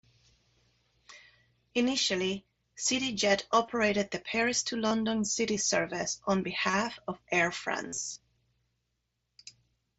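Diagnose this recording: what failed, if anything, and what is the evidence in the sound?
Concealed Bluetooth headset packet loss on the wireless headset-to-phone link: brief fills at 3.66 to 3.68 s, 4.87 to 4.91 s, 6.70 to 6.73 s, then scattered losses from 7.88 to 8.18 s, the longest about 45 ms. The receiver repeats recent waveform, so these gaps buzz at full level instead of dropping to silence.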